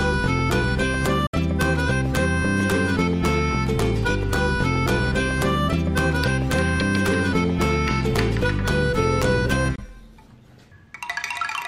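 Brief silent gaps cut the sound at 1.26–1.34 s and 9.76–9.79 s, resuming further along. This is likely a Bluetooth dropout, with roughly three packets, then one, lost in transmission.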